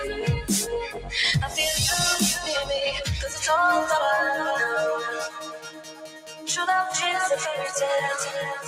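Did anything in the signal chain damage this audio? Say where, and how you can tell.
Yes. The damage happened at the call-processing stage. A noise suppressor meant for speech was left running on this material, and it treats steady tones, ambience and decaying tails as noise. Throughout the clip, the level swings by around 10 dB as the suppressor keeps deciding what to keep. You can hear it as pumping and a thinned, fluttering texture. Sharp onsets get through largely intact, while anything sustained is pulled down between them.

Two passages show the sound cut by the noise suppressor. From 0.86 to 1.11 s the sound drops by about 8 dB, and the affected stretch is roughly a third of a second. The heavier case runs from 5.2 to 6.49 s, where the dip reaches about 14 dB and the damage lasts around a second and a half. In both places the held or fading material is clamped and its decay cut short, which is the signature of the suppressor misjudging it as background.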